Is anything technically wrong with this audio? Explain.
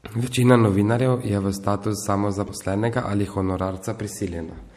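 Yes, there are two faults. Throughout the speech there is plainly audible MP3 compression damage, most likely from an MP3 encode at a low bitrate; the coarseness fits something around 64 kbps. Short of bits, the encoder drops the treble above a fixed cut-off and discards weak frequency lines that flicker in and out between frames. The result is a watery, swirling texture with chirpy sibilants and smeared consonant onsets. Unlike a simple low-pass filter, the damage shimmers and changes over time instead of just dulling the sound.

From 2.45 to 2.50 s, right after "novinarjev je v status", there is damaged data in the compressed stream. Corrupted bytes make the decoder misread frames and lose sync until it finds the next valid frame header. This is heard as a brief glitch of about 50 ms. It is a single localized glitch, which distinguishes it from the steady, clip-wide compression artefacts.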